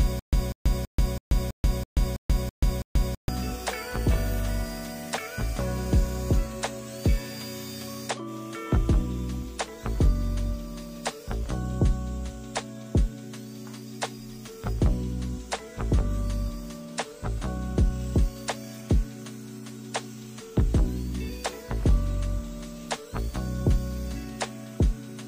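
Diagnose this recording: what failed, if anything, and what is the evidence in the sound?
From the very start until 3.29 s the clip is caught in a stutter with silent gaps: a 194 ms fragment repeats nine times, each followed by about 134 ms of dead silence, for a steady 328 ms cycle. The failure is at the playback or buffering stage, likely a stalled stream that replayed its last fragment at each retry before running empty, so the sound due in that window never arrives. On a waveform this shows as identical blocks separated by flat silent gaps. A spectrogram shows repeated vertical stripes with black bands between them.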